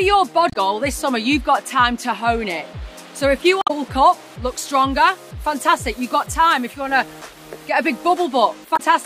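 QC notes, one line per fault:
0.49–0.56 s, 3.60–3.71 s, 8.73–8.80 s: damaged data in the compressed stream. Corrupted bytes make the decoder misread frames, lose sync and hunt for the next valid header, so each spot comes out as a short chirp, squawk, click or hole of about 70 to 110 ms.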